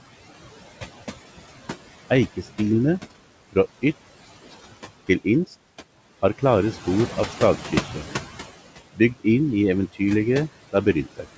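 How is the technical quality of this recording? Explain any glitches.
The recording has two related faults, both from noise suppression, heard over a call path that stops at 8 kHz, which fits a wideband codec such as G.722, with room noise about 16 dB below the speech.

Noise suppressor artifacts run through the whole clip. The suppressor pulls down the bands it judges to be steady background by about 15 dB, frame by frame, so the room noise sinks in the pauses and swells back under the speech. It differs from plain room noise because the floor pumps with the speech instead of staying constant.

Speech cut by the noise suppressor occurs between 10.72 and 11.25 s, near the end. Across roughly a tenth of a second within that span, the suppressor mistook quiet speech for noise and lowered it by up to about 15 dB along with the background. Soft sounds and word endings there come out faint or swallowed. 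Unlike a dropout or a gap, the audio never goes silent. It only dips, and the cut follows the suppressor's gain rather than a sudden break.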